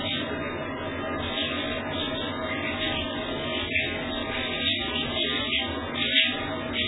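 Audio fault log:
throughout: MP3 compression. Dull, swirling sound with nothing above 3.8 kHz, likely from a bit-starved MP3 encoder, fitting about 8 kbps, which cuts treble and drops faint detail.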